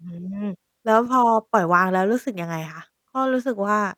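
Nothing goes wrong anywhere in this bit of speech, so there's no technical fault to walk through here.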